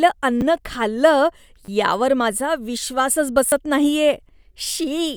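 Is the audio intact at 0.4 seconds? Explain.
No. At 0.41 s there is a repeated buffer fault: new audio arrived too late, so the playback device sent out the piece it had just played once more. That piece is only 10 ms long, which fits a 10 ms buffer, so the repeat sounds like a short click or brief buzz rather than a stutter. Roughly 10 ms of the speech is lost. A dropout would leave a gap of silence, but here the same sound plays twice with a hard join.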